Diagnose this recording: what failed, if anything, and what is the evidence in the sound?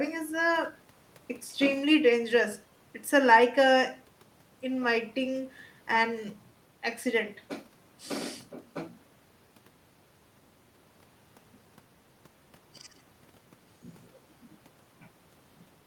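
Nothing failed: the sound of this speech recording carries no evidence of a fault at any stage.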